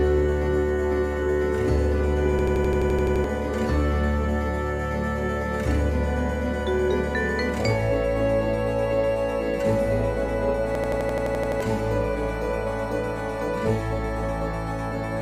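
A system hang loop hits twice, at 2.39–3.24 s and 10.75–11.61 s: an 85 ms chunk repeats ten times as an 11.7 Hz machine-gun stutter, fitting a 4096-sample buffer, losing about a second each time.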